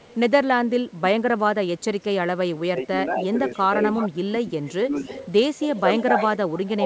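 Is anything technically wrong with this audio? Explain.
Yes, there are two problems: echo leak and speech suppressed in double talk.

Echo leak: from 0.0 to 0.16 s a faint delayed copy of the speech trails by 186 ms. From 3.5 s to the end, a much stronger copy follows at 252 ms. This is likely a far-end loudspeaker echo that its canceller failed to remove.

Speech suppressed in double talk: between 2.5 and 3.72 s, about 0.3 s of speech dips by up to roughly 20 dB. Between 4.27 and 6.18 s, around 0.7 s drops by similar depths, and from 6.78 to 6.85 s there is a slight dip. The cause is likely an echo canceller turning down the talker while both sides spoke at once.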